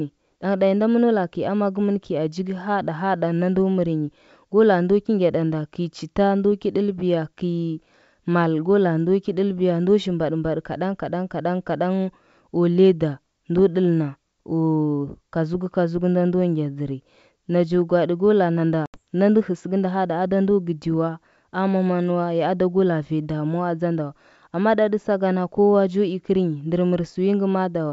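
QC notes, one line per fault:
18.86–18.99 s, packet loss on the ADPCM call: a few packets (about 80 ms) become hard-edged silence. The decoder's predictor and step size then briefly mistrack on resumption.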